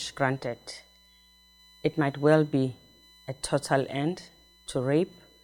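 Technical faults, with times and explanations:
Throughout, USB whine: current drawn by the USB bus in 1 ms frames leaks into the audio through the power or ground, leaving a steady fixed-pitch whine at 1 kHz and its multiples, strongest at 4 kHz, roughly 30 dB below the sound.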